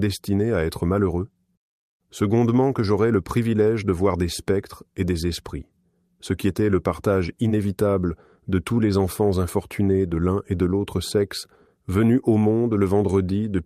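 No technical faults can be heard anywhere in this audio.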